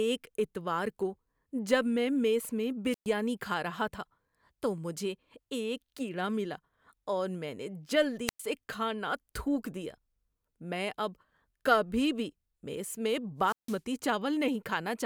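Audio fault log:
2.91–3.07 s, 8.27–8.40 s and 13.41–13.80 s: wireless microphone squelch dropout, three times. Each time the FM radio link fades, hiss swells briefly, then the receiver's squelch mutes the output for 119 ms, 105 ms and 161 ms respectively, leaving near-silent holes before the speech returns.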